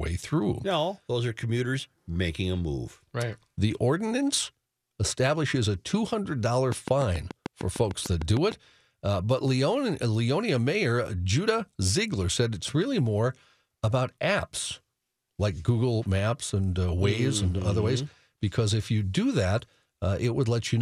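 It's a speech recording, and the obvious problem is a train of clicks from 6.72 s to 8.53 s, stopping just before "uh but". You get around fifteen evenly spaced, near-identical ticks at 6.7 per second, poking out roughly 10 dB above the speech, so they're plainly audible through the gaps too. That steady, repeating pulse likely comes from interference from nearby equipment or a faulty connection or power supply.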